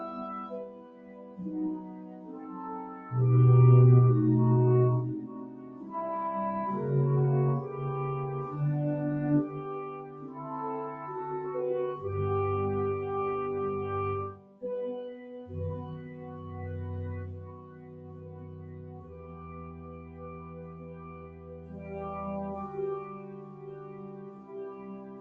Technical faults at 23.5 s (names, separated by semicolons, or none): noise suppressor applied to music or sounds; sound cut by the noise suppressor